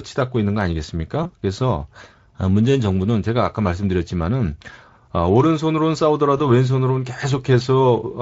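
Speech carried over a Speex link, and it has two short dropouts from VoIP packet loss concealed by the speech codec, at 1.23 to 1.34 s and 6.37 to 6.41 s. Each sounds like one missing 20 ms frame that the decoder patched with a fading, stretched smear, and the audio stays weak or distorted as it recovers.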